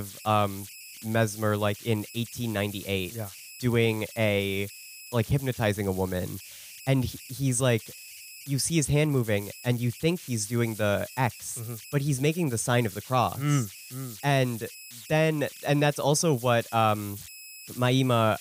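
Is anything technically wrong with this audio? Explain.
Yes. Throughout the speech there are converter idle tones. An undithered delta-sigma converter falls into repeating bit patterns on quiet input, producing a whistle around 3 kHz in the pauses and a grainy noise under soft passages, about 18 dB below the signal.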